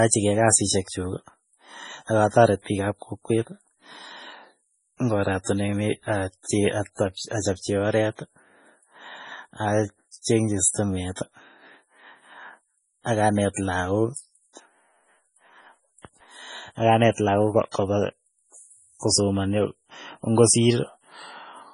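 From start to finish the speech has nothing above 10.5 kHz and a watery, swirling texture, with metallic chirps on s sounds and consonant attacks smeared. This is heavy damage most likely from MP3 compression, consistent with a very low bitrate around 24 kbps. Starved of bits, the encoder cut the treble at a fixed point and zeroed weak frequency lines, which flicker on and off from frame to frame and produce the swirl.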